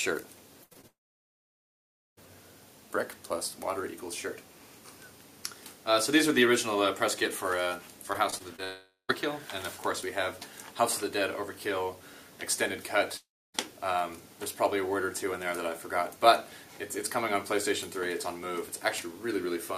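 A held, fading buzz or hiss lasting about 80 ms at 0.63 to 0.73 s is a burst of packet loss. A run of packets went missing, and the receiver stretched the last sound and let it decay. When real audio returns, that stretch of the original is simply gone. Straight after it come two tiny smears or wobbles, at 0.73 to 0.77 s and 0.81 to 0.85 s. Each is a short concealed packet loss of about 20 ms, where the decoder briefly extrapolated the preceding sound and then crossfaded back into the real signal, enough to blur or swallow a brief transient. At 0.87 s the sound trails off into a fading tail and then silence for about 1.24 s, returning at 2.19 s with roughly 1.3 s of material missing. Two shorter versions of the same collapse follow, at 8.64 to 9.11 s, where the silence lasts about 0.13 s before the audio resumes, and at 13.17 to 13.56 s, with about 0.29 s of silence. All three are most likely a long network dropout, in which nothing arrived for longer than concealment can bridge, so the synthetic tail dies out and a piece of the audio never plays. 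Between 8.13 and 8.60 s the sound turns choppy. This is repeated packet loss (robotic sound). Four separate gaps, none longer than about 21 ms, were each patched by repeating the last sound, and they come close enough together that the patches make up about 15% of the stretch. Those quick alternations between real and filled audio give it the choppy, stuttering character, and this episode runs straight into the second dropout.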